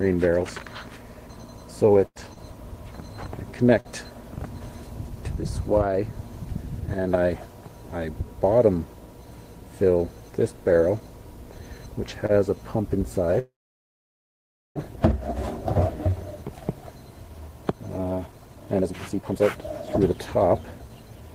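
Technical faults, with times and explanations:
1.99–3.88 s, repeated packet loss (robotic sound): the audio turns choppy, with four breaks in under two seconds where pieces drop out and the preceding sound is smeared across the hole. About 177 ms is filled in and about 60 ms is lost outright. The longest gap is 90 ms, and roughly 9% of the stretch is concealed. Packets kept going missing or arriving late, and each time the receiver patched the hole by extending the last sound it had.
12.26–12.32 s, short stall from a late packet: a sound is held on too long, by about 28 ms, and then the audio carries on normally with nothing skipped. One packet was not there when it was due, so the jitter buffer ran dry. The receiver stretched the last sound until the packet turned up, then resumed from the same point. This adds 28 ms of delay.
13.39–14.79 s, call audio freeze: the last sound is briefly carried on and then fades away, leaving about 1.25 s of silence. 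The audio then picks up exactly where it stopped, with nothing missing, so roughly 1.37 s has been inserted. The likely cause is that packets were held up in transit and the jitter buffer emptied, so the receiver had nothing new to play until they arrived.
17.54–21.29 s, jitter buffer speed-up: the audio runs hurried, at about 122% speed, while the pitch stays the same. The buffer had built up more audio than its target, as happens when delayed packets land together. To bring the delay back down, the receiver cut out many short pitch-period-sized pieces in a row, taking out around 0.7 s in total across the stretch.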